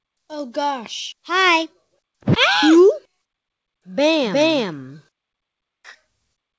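No technical faults can be heard anywhere in this recording.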